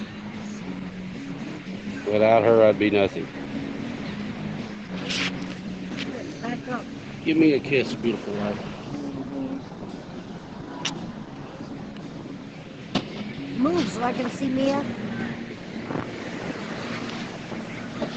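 No technical faults can be heard in the audio, which carries the ordinary signature of a call chain: the microphone processing trims the lowest bass, and the call codec leaves nothing above 8 kHz, as expected for that path.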